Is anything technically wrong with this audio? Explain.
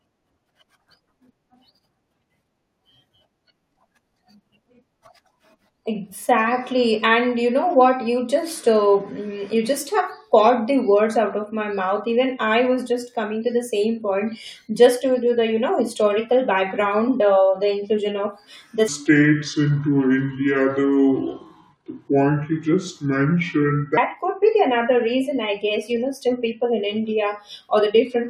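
Yes. From 18.88 to 23.97 s there's a section at the wrong speed: the speech suddenly runs at about two-thirds of its normal rate (0.663x) and drops roughly seven semitones, so it sounds deep, slow and dragged out before snapping back to normal. Because pitch and tempo fall together rather than independently, that stretch was likely played back or conformed against the wrong clock, not deliberately slowed with pitch correction.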